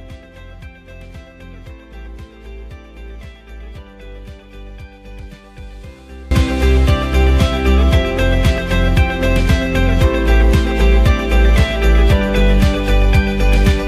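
From 0.0 to 6.31 s the audio collapses when heard in mono: centred content and low end almost disappear, leaving a faint residue about 22 dB down. This is likely one channel inverted, so material common to both sides cancels on summing.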